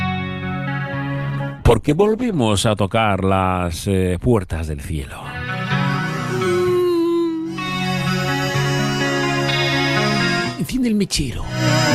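From 1.1 to 2.53 s, a call bitrate drop: the bandwidth estimate collapsed and the encoder was starved of bits, falling from what sounds like about 48 kbps to near 11 kbps for roughly 1.3 s. The sound turns coarse and muffled, losing its top end until recovery.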